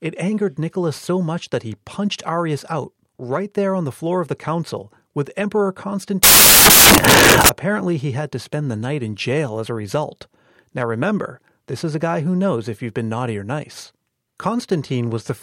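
From 6.23 to 7.49 s, samples were built from the wrong bytes, misassembled through a byte offset, swapped order or wrong alignment, so the low bits dominate and the speech becomes loud, harsh broadband noise.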